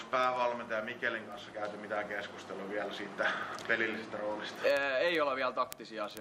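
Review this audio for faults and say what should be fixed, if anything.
Sharp ticks of uneven strength recur steadily, roughly every 70 ms, from 0.11 s to 6.17 s, about a hundred in all. These are word clock ticks: the receiver runs on its own clock, around 300 ppm off the sender's, so each clock slip drops or repeats one sample. Lock the receiving device to the incoming digital stream or to a shared word clock.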